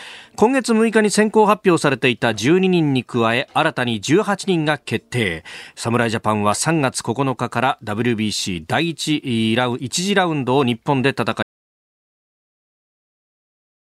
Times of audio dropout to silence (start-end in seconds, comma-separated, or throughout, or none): 11.42-13.91